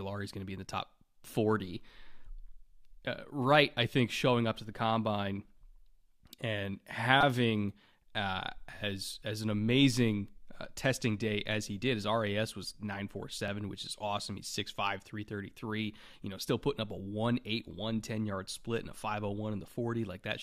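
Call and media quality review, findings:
Repeated buffer at 7.21 to 7.23 s. Brief buzz, not a stutter. One short piece plays four extra times, with a hard join at each repeat. Playback device starved of new audio and replayed its last buffer. Repeat rate points to a 5 ms buffer.

Repeated buffer at 13.48 s, just before "which is awesome". Single click. Same 5 ms piece plays once more. Same underrun mechanism. Little or no audio is lost in either event.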